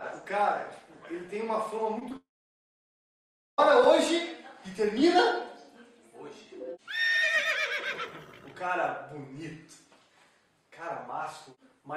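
Short concealed packet loss occurs at 1.99 to 2.03 s and again at 2.09 to 2.12 s: each time about 20 ms of audio failed to reach the decoder, and the receiver patched the gap by extending the preceding sound before blending back, leaving a brief smear or wobble. A long network dropout follows from 2.16 to 3.60 s, where roughly 1.4 s of audio is gone, the sound briefly trails off before about 1.34 s of near-silence, then resumes further along, most likely because the stream stalled and the receiver had nothing to play.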